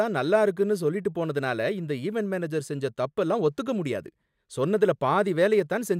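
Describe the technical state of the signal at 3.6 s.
At 3.6 s the signal is intact, with no audible fault at that moment.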